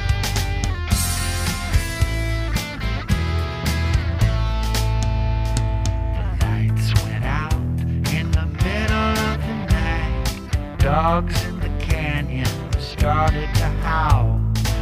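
There are no technical faults to describe at any point in time.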